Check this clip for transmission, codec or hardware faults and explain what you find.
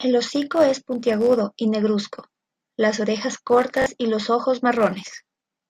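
There's one fault, a repeated buffer, at about 3.82 to 3.86 s in this speech clip. New audio didn't reach the output in time, so the device replayed the last chunk it had, twice more. Each chunk is about 21 ms, which fits a 1024-sample buffer. You hear it as a quick stutter with hard joins at each repeat, and roughly 40 ms of real audio gets skipped.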